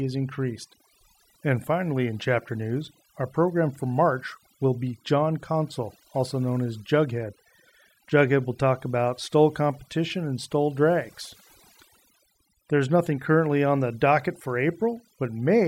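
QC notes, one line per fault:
Throughout: overdone noise removal. The noise reduction was pushed too hard on this speech, so any frequency band close to the estimated noise floor gets pulled far down or switched off entirely. Between phrases the background drops and breaks up into twinkling specks where isolated bands flicker on and off, while softer parts of the voice are removed along with the noise.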